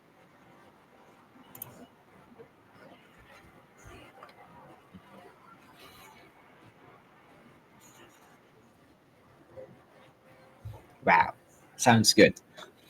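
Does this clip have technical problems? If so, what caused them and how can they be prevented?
Yes. Microphone overload, likely from input gain set too high, pushed the signal about 3 dB past the converter's ceiling from 12.19 to 12.24 s. The tops of those peaks are sheared flat, adding a short, harsh crackle to the loudest speech there, though only a small fraction of samples is cut. Lowering the input gain so peaks sit several decibels below full scale would prevent it.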